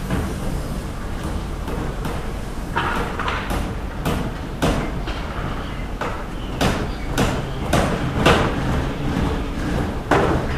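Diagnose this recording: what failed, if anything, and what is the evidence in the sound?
Nothing failed: no stage in the chain, from wiring through playback, leaves any audible mark on this sound.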